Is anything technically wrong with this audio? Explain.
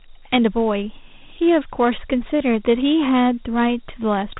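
Yes. Throughout, the speech carries Dialogic VOX ADPCM damage. Coarse 4-bit step coding leaves a plainly audible gritty hiss that tracks the speech and nothing above 3.8 kHz, which fits a 32 kbps stream. Unlike plain band-limiting, the grit rises and falls with the speech.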